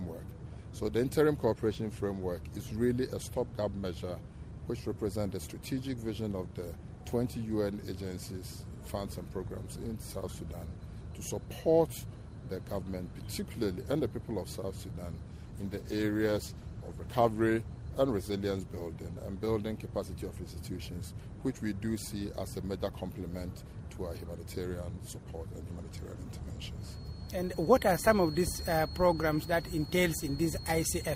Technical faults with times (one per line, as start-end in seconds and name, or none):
15.33-19.25 call bitrate drop
26.74-31.15 feedback whistle